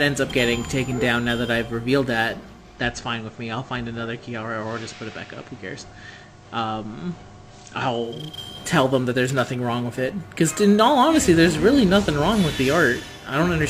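The audio has two faults. Sample clock jitter runs through the whole clip. The converter's clock wanders by a few microseconds, around 5 µs, so each sample is taken slightly early or late. Fast-changing parts of the waveform suffer most. The result is a grainy hiss and roughness, roughly 25 dB below the signal, that follows the loud and bright passages and disappears when the sound stops. From 2.42 s to 8.41 s there is digital radio blending to analogue. The receiver loses the digital stream and cross-fades to the FM broadcast of the same station over about 433 ms, then fades back at the end. During the FM stretch the level drops by about 3 dB. Broadband hiss rises to around 35 dB below the signal.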